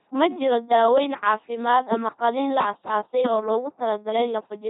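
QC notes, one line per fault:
throughout: LPC-10 vocoder. The speech has been reduced to a ten-pole vocal tract filter excited by either a pulse train or noise, with each frame forced to be fully voiced or fully unvoiced. Heavy damage results: a buzzy, mechanical robot voice with hiss or buzz wherever the voicing choice goes wrong, and nothing above 3.8 kHz. This degree of damage fits a 2.4 kbit/s coding.
1.92–1.95 s, 3.24–3.27 s, 4.19–4.22 s: loud pop. Each time, a single sharp pulse roughly 25 dB above the speech lands on the signal for about 30 ms and is shaped by the circuitry after it. The speech continues underneath. The sudden step is likely a voltage transient from a switch, plug, static discharge or driver glitch. It is heard as three separate, abrupt pops standing well clear of the speech.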